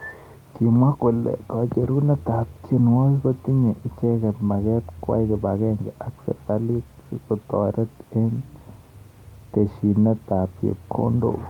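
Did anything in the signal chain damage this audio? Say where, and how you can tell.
No, nothing I can hear in this speech recording points to any stage of the chain having damaged it.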